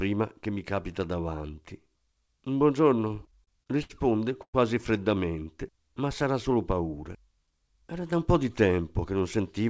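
From 3.08 to 3.93 s the speech suffers repeated stalls (stutter). Packets arrived late, and the jitter buffer ran dry seven times. Each gap was filled by stretching the last sound, 175 ms in total, the longest 73 ms. Nothing is lost, but about a fifth of that span is filler. It drags and stutters.

At 4.42 to 4.57 s there is a brief freeze. The last sound is held, then fades, with about 70 ms of near-silence. This is likely a call audio freeze from delayed packets. About 112 ms is inserted, and the speech resumes where it stopped.

From 7.36 to 8.20 s comes a jitter buffer speed-up. Too much audio had built up. The receiver cut short pitch-period pieces, roughly a twentieth of a second in all. Speech runs at 106% speed, pitch unchanged, and sounds hurried. Nothing is heard above 8 kHz, which fits a G.722 call path.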